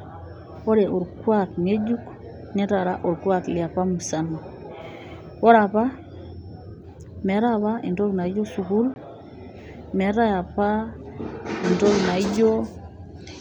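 A packet likely failed to reach the headphones in time, a Bluetooth dropout: from 8.94 to 8.96 s, just after "entoki naijo sukuul", the speech cuts to silence for about 20 ms, fitting one lost packet, and resumes as if it had kept playing.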